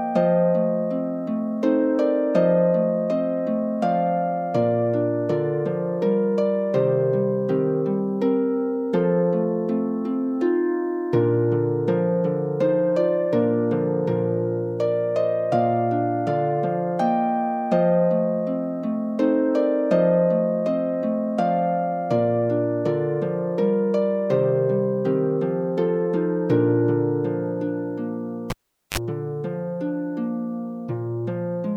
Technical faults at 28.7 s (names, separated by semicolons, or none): cable pulled and plugged in